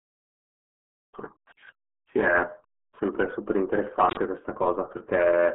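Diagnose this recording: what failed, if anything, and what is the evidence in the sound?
The codec stage failed: the speech passed through the RealAudio 14.4 codec, with damage consistent with an 8 kbit/s rate. Throughout, nothing reaches above 3.9 kHz and the band sits near 250 Hz to 3.4 kHz, so the heavy coding leaves the voice muffled and gargly.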